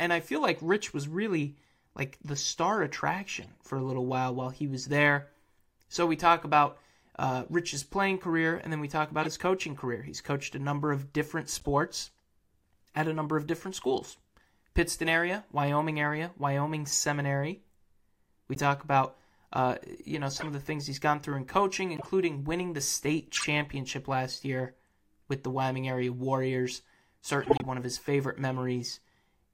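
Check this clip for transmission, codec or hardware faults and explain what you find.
The speech has one fault type, corrupt frame decoded, at 3.42–3.49, 9.22–9.27, 11.54–11.66, 18.55–18.60, 20.35–20.47, 21.96–22.06, 23.35–23.44 and 27.43–27.65 s. Damaged compressed frames were decoded anyway, misplacing spectral energy and producing short chirps or noise bursts. The loudest is at 27.43 s, about seven frames long.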